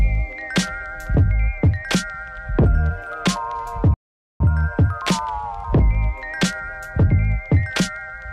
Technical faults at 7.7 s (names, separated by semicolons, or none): none